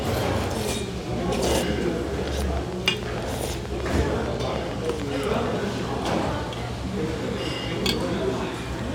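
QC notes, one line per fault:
2.28–5.47 s, train of clicks: a run of about twenty sharp, near-identical clicks at a steady 6.6 per second, standing well above the program, roughly 15 dB louder than the surrounding sound at their peaks. Because each pulse has the same short shape and the spacing is regular, the ear groups them into a mechanical ticking laid over the audio rather than isolated pops. The likely cause is interference from nearby equipment or an interface intermittently failing and injecting a pulse on each cycle.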